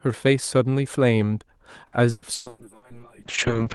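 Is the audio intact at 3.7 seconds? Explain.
No. At 3.7 s the speech is inside a call bitrate drop that runs from 2.49 s to the end of the clip. The bandwidth estimate fell, and the Opus encoder cut from 32 kbps to 6 kbps, holding that floor for about 1.23 s. With so few bits, the coding becomes coarse and the audio bandwidth narrows from 12 kHz to 8 kHz, so the voice sounds rough, watery or muffled, with less detail than in the earlier part.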